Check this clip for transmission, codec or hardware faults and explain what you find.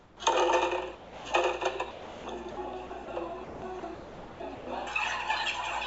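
Three kinds of fault are audible, all tied to the sender's voice detection. The call path also limits everything to below 8 kHz, which fits a G.722 codec.

Comfort noise in place of the background, 0.00 to 0.20 s. The real background gives way to steady, featureless noise about 7 dB quieter. The sender likely stopped transmitting during a quiet stretch. The receiver then synthesised rough background noise.

Sound dropped by the voice detector, at 0.95 to 1.25 s, 1.91 to 2.24 s and 2.51 to 2.57 s. Each time the sound vanishes into flat noise, then returns. The detector likely mistook real sound for background and stopped sending it.

Sound chopped by the voice detector, at 2.87 to 3.08 s and 3.44 to 4.67 s. Here the sound is choppy. The detector likely switched sending on and off repeatedly, so fragments were filled with comfort noise.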